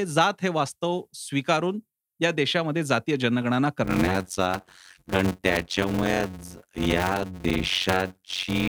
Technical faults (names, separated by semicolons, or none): block size mismatch (padded)